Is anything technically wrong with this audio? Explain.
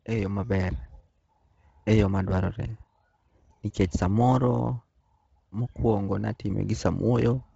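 Yes. Throughout the speech there is heavy Bluetooth LC3 compression damage, likely from a low-rate LE Audio link. The codec discards much of the upper band, filling it with noise, and nothing reaches above 7.8 kHz, leaving a breathy, grainy edge. Unlike a plain low-pass cut, the noise fill adds hiss-like texture.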